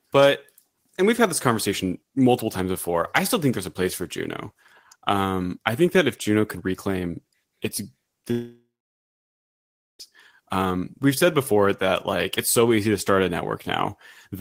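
Speech, with a long network dropout from 8.31 to 10.01 s, just after "could reclaim its": the last sound smears into a fading buzz, then about 1.3 s of silence, likely from lost packets. Roughly 1.7 s never returns. A spectrogram shows a blurred tail, then an empty gap.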